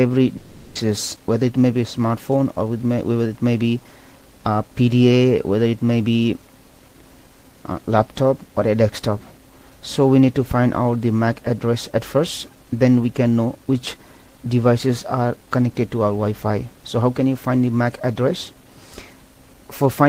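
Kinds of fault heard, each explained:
Long network dropout: from 0.37 to 0.77 s the last sound is stretched into a fading buzz for about 0.38 s, then the audio resumes with that part missing, likely because packets stopped arriving. Unlike a brief packet loss, the gap is long.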